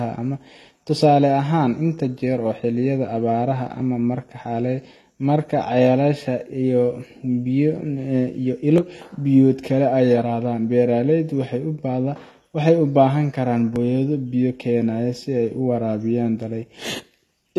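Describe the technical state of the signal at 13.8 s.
At 13.76 s, just before "biyo keenaya si", about 20 ms of speech vanishes and the two sides butt together with no gap. This is audio missing between chunks, likely lost at a chunk boundary. Unlike a dropout, no silence is heard, only a jump.

Throughout, including this moment, nothing sounds above 12.8 kHz, and two different compression artefacts are heard together. This points to transcoding between lossy codecs, likely MP3 followed by HE-AAC, rather than to a single low-bitrate encode.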